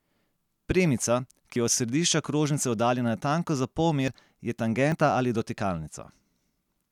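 Dropped buffers (overrun) at 1.56, 4.08 and 4.92 s break up this speech clip: each is a sudden jump forward in the sound with no gap of silence. Roughly 40 ms is missing each time, likely because the recording software fell behind and the hardware overwrote that block before it was read, splicing the two sides together.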